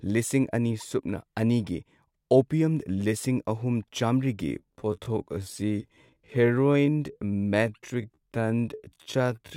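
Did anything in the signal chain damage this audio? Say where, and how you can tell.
Yes. From 4.42 s to the end, a time-stretched section slows speech to about 0.6x at unchanged pitch. It drags, likely from a stretching stage. The spectrogram shows elongated harmonics.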